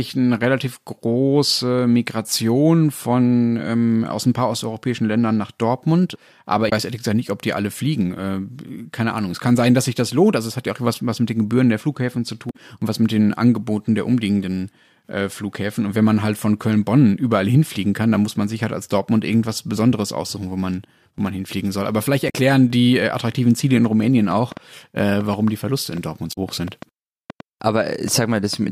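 Damaged data in the compressed stream hits at 6.69 to 6.72 s before "weiß ehrlich gesagt nicht", 12.47 to 12.56 s before "und was mit den", and 22.26 to 22.34 s before "die äh attraktiven". Corrupted frames throw the decoder off sync until it finds the next frame header.

A train of clicks runs from 23.86 to 28.54 s: around fifteen similar pops at an uneven pace, about 3.2 per second, peaking roughly 5 dB above the sound. The cause is likely nearby interference or a faulty connection. Within it, at 26.32 to 26.38 s, another damaged-stream blip occurs.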